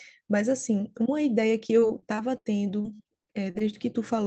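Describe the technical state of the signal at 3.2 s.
At 3.2 s you're inside a stretch of repeated packet loss (robotic sound), 1.79 to 3.62 s. Short dropouts, up to 78 ms each, get patched by extending the previous sound, giving choppy speech with pieces missing.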